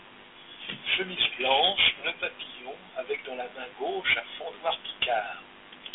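Throughout the speech runs Dialogic VOX ADPCM, which fits 4-bit samples at 32 kbps. Coarse step quantisation leaves a plainly audible gritty hiss trailing the speech, and the line band spans 200 Hz to 3.5 kHz. A spectrogram shows nothing above 3.8 kHz.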